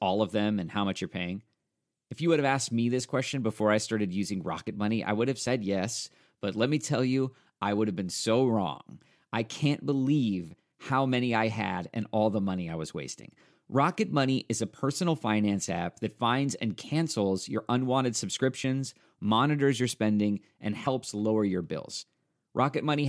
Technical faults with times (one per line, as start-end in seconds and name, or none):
none